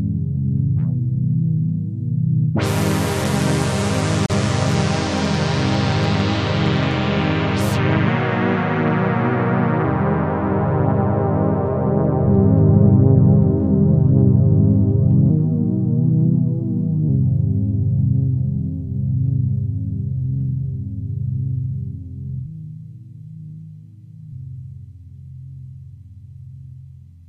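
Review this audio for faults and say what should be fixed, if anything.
A gap at a join of encoded pieces opens at 4.26 s and runs to about 4.30 s, a break of about 37 ms in continuous sound, after which the audio resumes exactly where it left off. The two sides were encoded as separate pieces and butted together untrimmed, so the encoder's start-up delay on the second piece and the padding of the first piece's final frame both remain as dead air, and the codec softens the edges of that hole. To prevent it, encode the material in one pass or use gapless joining that trims each piece's encoder delay and end padding before concatenation.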